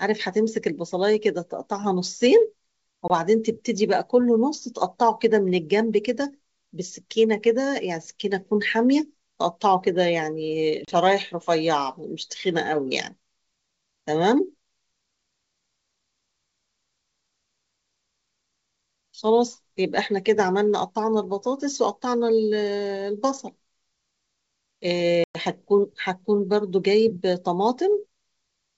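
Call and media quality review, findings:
Packet loss on the ADPCM call: hard-edged silent holes at 3.08–3.11 s, 10.85–10.94 s and 25.24–25.37 s, losing 20, 30 and 110 ms. That's maybe two, three, then about ten packets. Decoder predictor and step size drift from the sender's, so audio returns slightly distorted before settling. The 64 kbit/s G.722 wideband path itself sounds clean.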